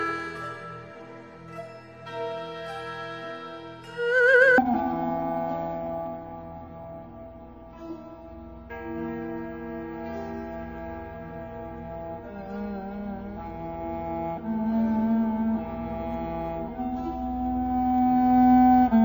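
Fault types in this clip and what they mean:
stereo read as mono: alternating left and right samples are read as one channel, so from 4.58 s the sound plays at half speed, an octave low.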